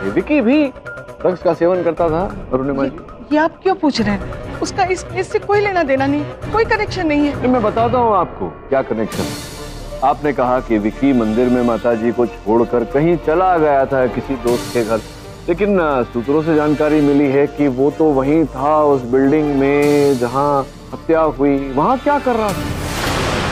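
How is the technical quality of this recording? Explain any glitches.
No glitches can be heard anywhere in the recording; the signal stays continuous and stable, with no technical faults to explain.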